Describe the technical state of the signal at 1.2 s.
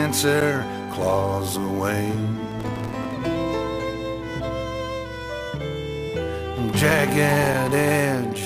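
At 1.2 s the signal is intact, with no technical fault present at that point.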